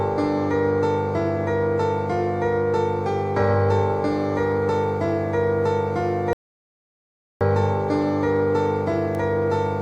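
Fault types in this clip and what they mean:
Audio dropout to silence: From 6.33 to 7.41 s the sound just stops dead for about 1.08 seconds, then picks back up mid-flow. The gap is silent, with no room tone or hiss underneath, so whatever happened in that second is simply gone. That pattern likely means the input went missing, maybe a link hiccup or a brief mute, while the recorder kept on writing silence.
Bit error spike: At 9.15 s there's a single sharp tick, very short and broadband, with nothing in the surrounding sound to explain it. It lasts only a couple of samples, which is what you get when one bit flips in a stored or transmitted value. The sample jumps by a power of two, snaps straight back, and leaves one click that has nothing to do with the audio around it.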